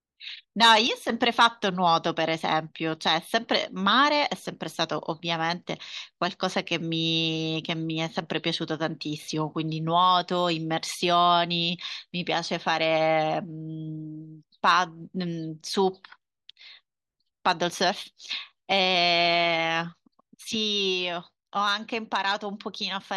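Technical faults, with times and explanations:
0.87–1.10 s and 20.55 s to the end, sudden gain jump: the digital gain likely switched from one sample to the next with no ramp, as when a level setting or bit shift is applied instantly. The speech and its background noise drop together by about 6 dB at each onset, and the first dip snaps back up about 0.2 s later. The hard step in level can produce a small click at each boundary.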